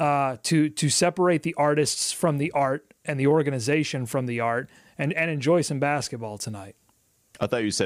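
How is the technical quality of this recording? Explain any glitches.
Nothing in the recording stood out as a technical problem on listening.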